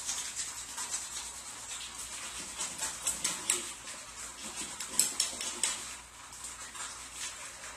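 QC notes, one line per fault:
Throughout: AAC compression, plainly audible, dull and smeared with a warbling, fizzy texture, likely AAC-LC quantising coarsely at a rate that fits roughly 32 kbps.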